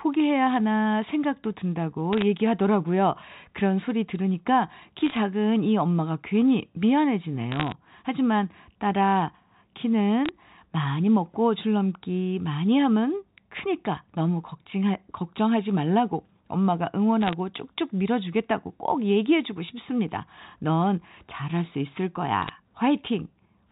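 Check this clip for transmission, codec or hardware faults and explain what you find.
The speech carries bit errors on a digital phone line, as crackle bursts at 2.13–2.22, 5.01–5.17, 7.52–7.72, 10.26–10.29, 17.22–17.33 and 22.42–22.49 s. Flipped bits, roughly 0.07 to 0.4 percent, corrupt single μ-law samples, producing sharp ticks over intact, band-limited telephone speech.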